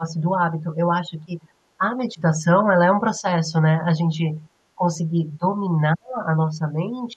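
Five stretches of the speech get pulled down, at 0.0–1.44 s, 1.78–2.47 s, 3.0–4.42 s, 4.76–5.64 s and 5.95–7.16 s, and it sounds like speech suppressed in double talk. The level dips and comes back in pieces. The drops run from around 5 dB in the middle one to about 10–15 dB, and the last one sinks by roughly 30 dB, almost gone. The likely cause is an echo canceller that took the talker for loudspeaker echo while both ends spoke at once.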